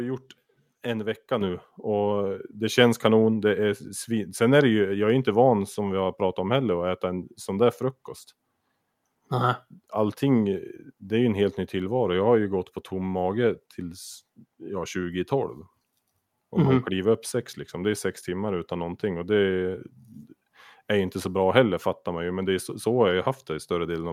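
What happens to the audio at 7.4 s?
At 7.4 s the speech carries on intact, with no dropout, click, distortion or other fault at that moment.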